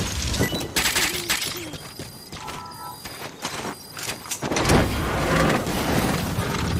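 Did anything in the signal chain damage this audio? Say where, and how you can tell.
Yes. At 0.37 s a network skip ahead drops roughly 0.7 s of sound and joins both sides directly. Unlike a dropout, there is no silence or fill.

From 1.70 to 2.37 s a jitter buffer speed-up plays at 112% and trims about a tenth of a second. Pitch stays unchanged, which rules out resampling.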